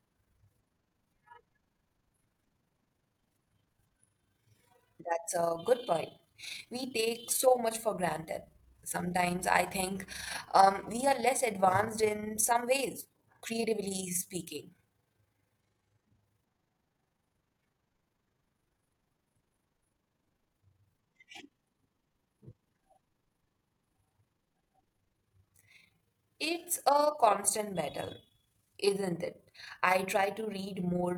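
From start to finish, the speech carries overlap-add ripple. It was split into windowed frames and rebuilt with an overlap whose windows fail to sum to a steady gain, so the level dips and swells once per frame, by about 6 dB, at around 30 times a second. That rapid periodic pumping is heard as a fast flutter laid over the speech, a rough tremolo that never lets up.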